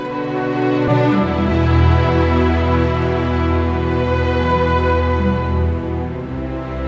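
At 0.88 s the audio has a skip ahead: playback jumps straight past roughly 0.7 s of material, likely because the jitter buffer overflowed and discarded queued audio. Unlike a dropout, there is no silence or filled gap, only an abrupt join, heard through a wideband call path with nothing above 8 kHz.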